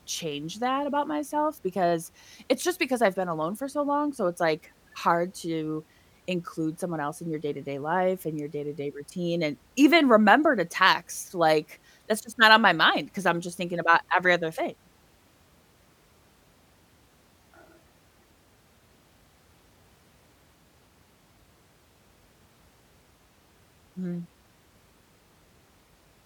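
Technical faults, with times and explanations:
Nothing stood out as a technical problem on listening to this speech recording.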